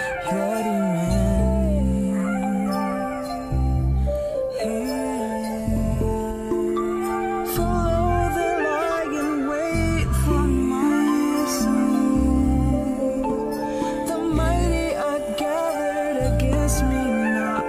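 No technical faults can be heard in this audio.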